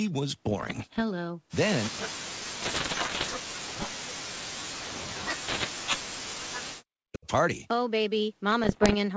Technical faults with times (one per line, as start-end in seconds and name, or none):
0.50-1.02 bit errors on an ADPCM link
1.84-1.90 echo leak
1.89-5.78 speech suppressed in double talk
2.62-3.34 bit errors on an ADPCM link
5.48-5.67 bit errors on an ADPCM link
6.06-7.27 speech suppressed in double talk
8.64-8.95 bit errors on an ADPCM link